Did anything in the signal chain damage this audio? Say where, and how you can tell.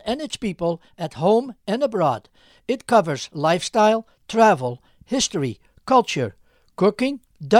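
No, there's no chain damage.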